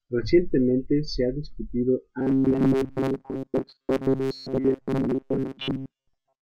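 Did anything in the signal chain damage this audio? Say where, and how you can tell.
Yes. From 2.19 s, right after "se ha discutido", to 6.49 s the speech turns into a rigid, metallic buzz pinned at 134 Hz. It still loosely tracks the speech's rhythm, but most of that stretch is repeated rather than fresh audio. This is robotic sound from repeated short buffers, likely at the driver or buffer stage. Audio arrived too seldom, so the same roughly 7.5 ms chunk was replayed, imposing that fixed pitch.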